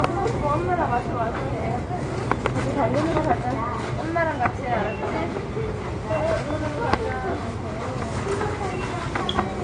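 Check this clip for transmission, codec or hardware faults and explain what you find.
One codec fault runs through the whole clip. It is likely transcoding between lossy codecs: the audio was probably encoded as low-rate AAC, then Opus, then WMA. Each stage re-coded the previous stage's artefacts, so the different codecs' artefacts are heard together, and everything above 9.7 kHz is gone.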